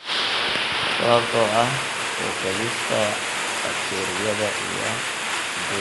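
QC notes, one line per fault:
Throughout, Dolby Digital compression: the speech sounds dull, with plainly audible coding damage, nothing above 11.5 kHz and a rough, fluttering noise clinging to voiced tones. The likely cause is an AC-3 style encoder short of bits, which fits a 64 kbps stream. It narrows the band and leaves many frequency lines with no detail, so the decoder fills those gaps with noise that shifts from block to block.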